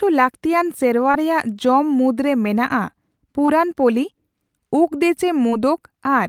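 Short concealed packet loss hits at 1.11–1.16 s, 3.46–3.50 s and 5.50–5.53 s. Each time about 20 ms of speech failed to arrive, and the receiver extended the preceding sound before blending back, giving a brief smear or wobble. A spectrogram shows smoothed, repeated harmonics across any gap that falls in voiced speech.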